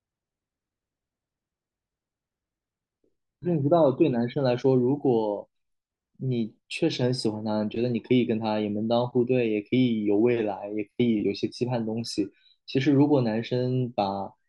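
Throughout the speech there is imaging from linear upsampling. Straight-line interpolation, likely from 24 kHz to 48 kHz, dulls the top and leaves faint 12 to 24 kHz mirror images around 40 dB down, adding metallic shimmer.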